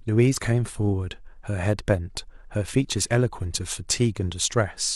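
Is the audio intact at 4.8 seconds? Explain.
Yes, the audio is intact at 4.8 seconds, with no fault at that point.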